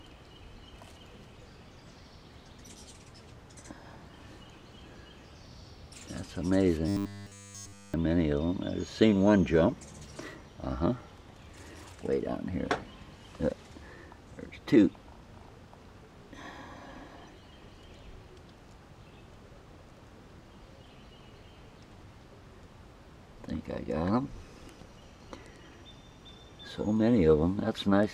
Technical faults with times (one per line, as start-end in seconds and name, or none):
6.89-7.94 robotic sound from repeated short buffers